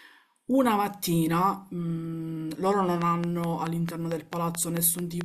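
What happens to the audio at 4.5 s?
At 4.5 s the speech is under a train of clicks running from 3.02 s to 5.22 s: about ten sharp, similar pulses at a regular 4.56 per second, peaking about 15 dB above the signal. Repeated pulse injection like this likely comes from nearby equipment interference or a faulty connection or power supply.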